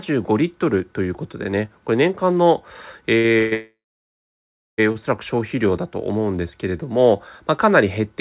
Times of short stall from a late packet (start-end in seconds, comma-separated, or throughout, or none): 3.18-3.37, 4.92-4.97